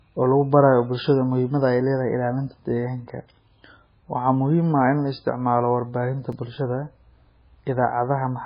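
From start to finish, the speech is bandlimited, with nothing above 5 kHz. It sounds watery and swirly, with smeared consonants. This is likely heavy MP3 compression, fitting a bitrate near 16 kbps.

At 6.32 s, just after "istacmalo warbahinta", a block of digital silence cuts in. For about 5.3 ms the output drops to silence, which fits a missed 256-sample buffer. It is heard as a tick or dip.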